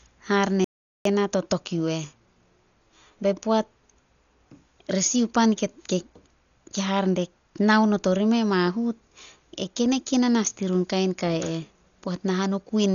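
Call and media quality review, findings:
Audio dropout to silence, 0.64–1.05 s: 408 ms of silence, no room tone, speech cut mid-flow; likely input lost while the recorder kept writing silence.

Dolby Digital compression, throughout: dull, rough speech with fluttering noise, nothing above 6.9 kHz; heavy damage, likely a starved AC-3 encode consistent with about 40 kbps, dither filling bands stripped of mantissa bits.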